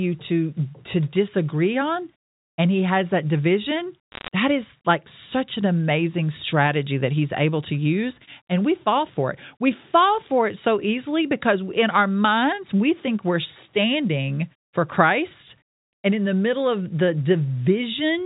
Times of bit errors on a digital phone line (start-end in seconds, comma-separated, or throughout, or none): 4.12-4.28